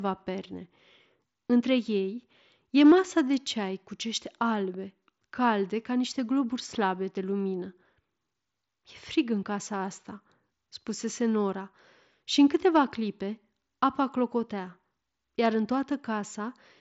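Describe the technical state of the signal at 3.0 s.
At 3.0 s the speech is intact, with no fault, only the band limit of the Bluetooth mSBC headset path, which leaves nothing above about 7.7 kHz.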